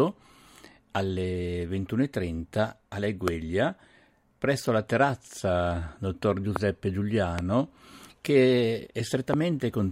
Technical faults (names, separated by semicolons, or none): loud pop